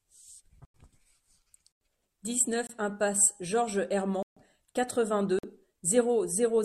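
Blocks of samples were replaced by zeros, the pattern of an output buffer not filled in time, giving a block of digital silence at 0.65–0.74 s and 1.72–1.81 s (93 ms each, which fits a 4096-sample buffer), 2.67–2.69 s (24 ms), 4.23–4.37 s (139 ms) and 5.39–5.43 s (46 ms, fitting 2048 samples). The speech cuts out and returns with no fade. The longer gaps are heard as holes and the 24 ms one as a very short hole.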